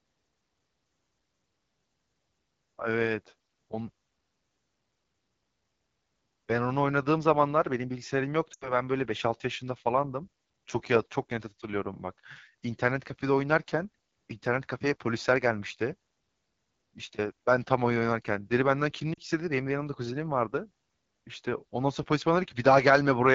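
A speech recording carried throughout by the AMR wideband (HD Voice) codec at one of its lowest rates. The rough, raspy edge on the voice fits about 8.85 kbit/s rather than 12.65 kbit/s or above. The airy top end comes from synthesized noise, not real detail, which separates it from simple low-pass band-limiting. Lost AMR speech frames interrupt it twice. From 8.53 to 8.74 s the sound smears and drains away quickly, consistent with about 80 ms of concealed frames. From 19.13 to 19.19 s there is a shorter dip. Both decay smoothly rather than cutting off hard, unlike packet-loss gaps or clipping.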